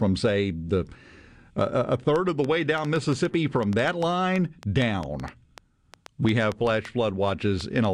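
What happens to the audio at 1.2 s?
Nothing goes wrong at 1.2 s; the speech continues intact through that moment with no audible fault.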